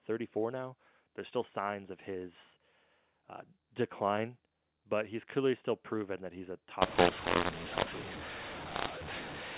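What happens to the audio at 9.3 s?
At 9.3 s the speech is inside a mu-law and A-law mix-up that starts at 6.82 s, just after "proven that he's a", and runs to the end of the clip. The telephone samples were coded as A-law but are being decoded as mu-law, so levels come out scrambled. The sound turns harsh and distorted, with hiss filling the gaps. On a waveform, quiet stretches sit well above silence. A spectrogram shows broadband noise smeared up to the 4 kHz ceiling.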